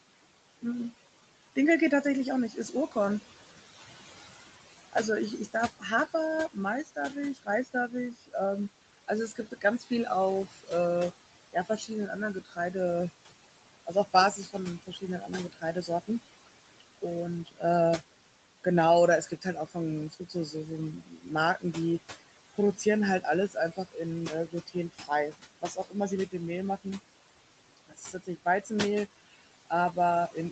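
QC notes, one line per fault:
throughout, noise suppressor artifacts: The room noise, which sits about 13 dB under the speech, dips between phrases and swells back under each one. The suppressor is pulling bands it judges to be steady noise down by about 17 dB frame by frame, so the residue pumps in step with the talking.
1.56–3.82 s, 4.93–12.75 s, 13.86–28.71 s and 29.7–30.51 s, speech cut by the noise suppressor: Soft consonants, word tails and quieter syllables sound swallowed or drop away. The cuts are brief in the first span, total roughly a second and a half in the second, and about three seconds in the third. The suppressor mistook low-level speech for background and turned it down with the noise, by about 12 dB, 18 dB, 17 dB and 13 dB at the deepest points.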